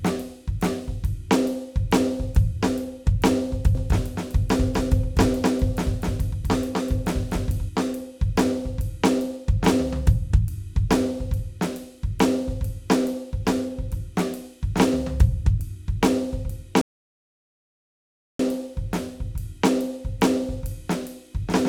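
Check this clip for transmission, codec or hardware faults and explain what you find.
Two faults turn up in this music clip, a doubled track and a playback stall.

From 3.75 s to 7.69 s there's a doubled audio track: a second full-band copy of the music sits roughly a third of a second behind the first, at about the same level. It's most likely the same signal being picked up again through a slower path, or an edit leaving two copies out of step. You hear a clean, flat echo with no room tail, and it cuts in and out abruptly at those edges.

At 16.81 s there's a rebuffering stall: the player ran dry of downloaded audio and simply waited. The music drops to dead silence until 18.39 s, then carries on exactly where it left off. Nothing gets skipped, but the gap adds 1.58 s to the running time.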